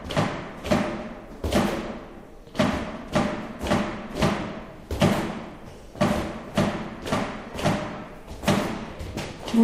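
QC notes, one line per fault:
No technical faults were found anywhere in the recording.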